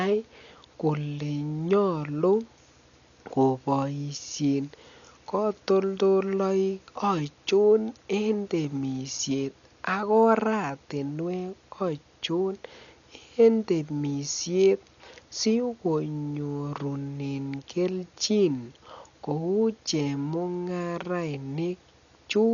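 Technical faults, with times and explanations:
Throughout: Dolby Digital compression. The speech is dull, with nothing above 7.1 kHz, and a rough, fluttering noise sits around voiced tones. This heavy damage is likely from an AC-3 style encoder starved of bits, which fits a bitrate near 48 kbps. It narrowed the band and left many frequency lines with no mantissa bits, so the decoder filled them with dither noise that flickers from block to block.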